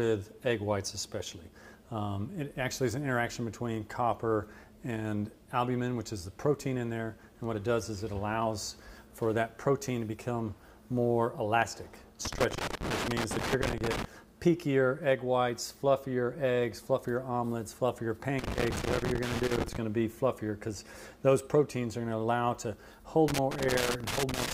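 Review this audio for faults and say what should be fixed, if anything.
Loose connector crackle appears three times: 12.25 to 14.05 s, 18.39 to 19.77 s and 23.28 to 24.52 s. A worn or dirty contact is making and breaking as it shifts, chopping the signal into irregular scratchy bursts. Unlike evenly spaced digital clicks or buffer dropouts, these bursts are ragged and clustered, as physical movement would produce. Clean or replace the connector and strain-relieve the cable so it cannot move.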